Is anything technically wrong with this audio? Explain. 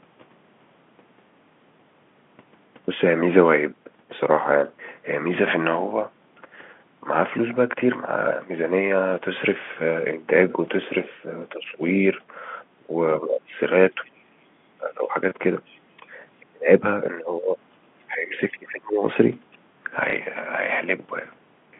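Yes. Between 11.18 and 19.04 s the speech repeatedly dips: at 11.18–11.81 s by about 10 dB, 12.8–14.2 s by about 20 dB, 14.78–15.15 s by about 15 dB, and 15.96–19.04 s by about 25 dB. This is likely speech suppressed in double talk, where the echo canceller, unable to separate the talker from loudspeaker echo, turns both down.

At 13.93–14.1 s and 15.66–15.8 s faint scraps of another voice, about 35 dB below the speech, surface. This is likely the other side's voice leaking through, residue the echo canceller failed to remove from the microphone.

At 20.1 s a brief 30 ms blip occurs. This is packet loss with the last packet repeated, consistent with a single lost packet, the receiver replaying the previous one. The telephone-band G.711 coding limits everything to roughly 150 Hz–3.5 kHz.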